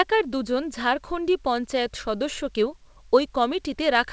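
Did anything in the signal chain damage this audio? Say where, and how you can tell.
No, nothing in the chain damaged this speech; the call path shows in its ceiling, with nothing above 8 kHz, which fits a wideband G.722 link.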